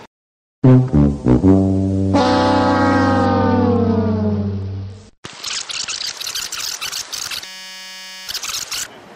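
From 3.25 s to 6.13 s there is a Bluetooth SBC bit pool drop. Link congestion forced the sending device to cut how many bits each SBC frame could carry. The degradation suggests a fall from a bit pool of about 31 to about 9, around 72 kbps. Starved of bits, the highest sub-bands go empty and the remaining ones are quantised coarsely. The treble turns dull and a gritty grain sits over the sound until the rate comes back.

At 7.45 s a system hang loop begins and lasts until 8.28 s. The host or its audio driver stopped supplying data, and the playback hardware kept replaying the same stretch of its ring buffer. That stretch is only 5.33 ms long, which fits a 256-sample buffer. It repeats 188 times a second, so the sound becomes a steady buzz at 188 Hz, and roughly 0.7 s of real audio never arrives.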